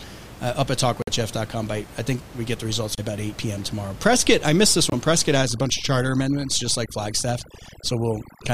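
A wireless link that likely could not deliver audio packets on time left the playback buffer empty three times, producing Bluetooth stalls. At 1.02 to 1.09 s the speech drops to about 51 ms of dead silence, at 2.95 to 2.99 s to about 26 ms, and at 4.90 to 4.93 s to about 22 ms. Each time the sound stops abruptly and then resumes, so the speech seems to stutter or briefly hiccup rather than fade.

From 5.36 s to the end, overdone noise removal sets in. A noise reduction process set far too aggressively pushes any frequency band it judges to be noise down to almost nothing, and the weaker parts of the speech are caught along with it. The room noise, heard earlier sitting about 18 dB below the speech, drops away and breaks up into twinkling specks.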